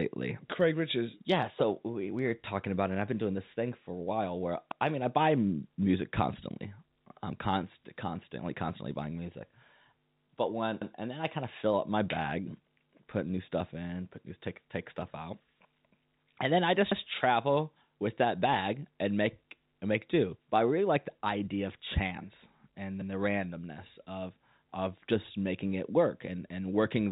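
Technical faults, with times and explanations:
4.72–4.82 s, 10.82–10.92 s and 16.92–17.02 s: overlapping chunks. At each join, 100 ms of speech plays twice, heard as a brief stutter. The first comes right after "for a while where". The joins fall every 6 s, because each new chunk starts 100 ms before the previous one ended.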